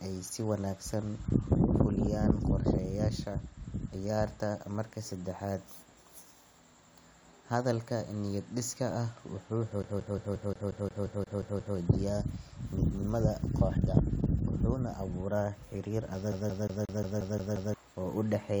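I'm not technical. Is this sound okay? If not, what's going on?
No. At 9.83 to 11.77 s and 16.32 to 17.74 s the CD is stuck on one turn, replaying the same 0.18 s snippet with tiny gaps, an even machine-gun stutter rather than a random dropout.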